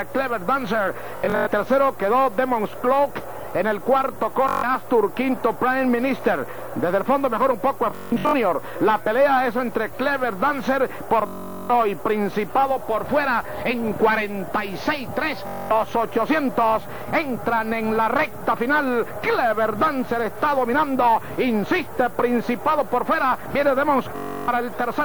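A steady, thin hiss rising toward the treble, only about 25 dB below the signal, runs throughout: low bit depth with noise shaping, which fits an 8-bit signal whose rounding error is pushed upward. Bluetooth stutter then buzzes and repeats at 1.17–1.47, 4.49–4.64, 7.91–8.34, 11.27–11.70, 15.47–15.71 and 24.16–24.48 s as the receiver replays short slices over lost or late data, each lasting about 0.15 to 0.43 s before the sound jumps ahead.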